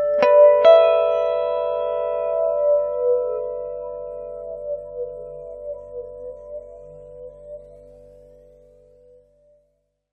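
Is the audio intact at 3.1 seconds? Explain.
Yes, at 3.1 seconds the audio is intact, with no dropout, click, distortion or other fault audible at that point.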